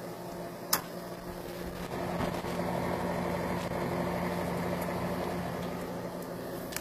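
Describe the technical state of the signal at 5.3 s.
At 5.3 s the audio carries HE-AAC compression artefacts, present throughout the clip and plainly audible. The treble is likely rebuilt by spectral band replication, consistent with roughly 24 kbps, so upper harmonics sound gritty and metallic, with nothing above 14.9 kHz.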